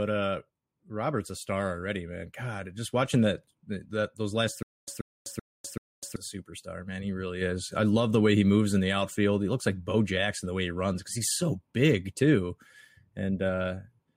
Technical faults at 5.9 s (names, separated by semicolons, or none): stutter with silent gaps